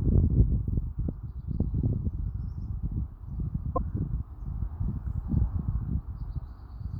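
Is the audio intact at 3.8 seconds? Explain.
No. Damaged data in a compressed stream hits from 3.76 to 3.78 s. The decoder misreads the corrupted frames and loses sync, producing a brief blip.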